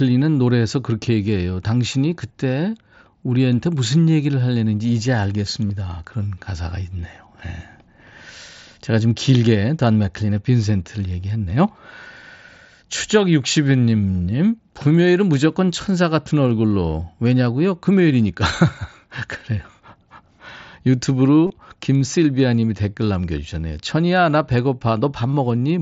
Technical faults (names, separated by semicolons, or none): concealed Bluetooth headset packet loss